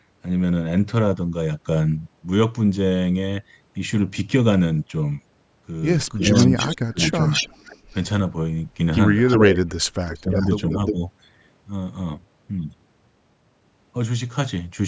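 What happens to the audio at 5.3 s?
Nothing goes wrong at 5.3 s; the speech passes through the call's microphone processing intact there, with no fault at that moment.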